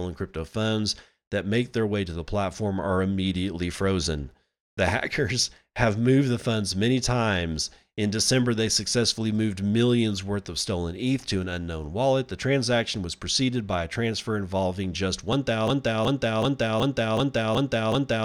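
At 15.68 s the speech locks into a broken-record loop that runs to the end of the clip. A single fragment of about 375 ms repeats exactly and back to back, seven times, with no change in level or timing between passes. The likely cause is a player, encoder or stream stalling and resending the last piece of audio it held, so whatever should have followed 15.68 s never arrives.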